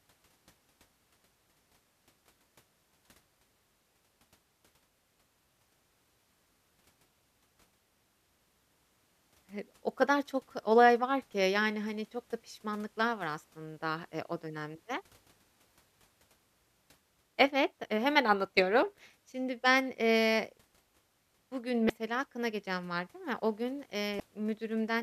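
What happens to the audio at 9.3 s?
Nothing goes wrong at 9.3 s; the speech carries on intact through that moment with no dropout, click or distortion.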